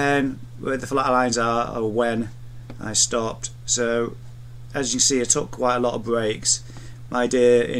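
Nothing is technically wrong with this audio, and no fault can be heard at any point in it.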